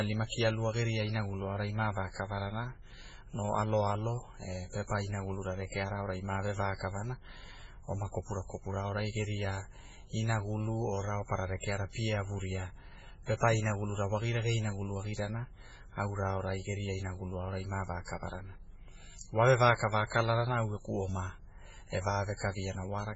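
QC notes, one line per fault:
Throughout: MP3 compression, likely at a very low bitrate near 16 kbps; weak bands flicker, giving a watery swirl a plain low-pass wouldn't.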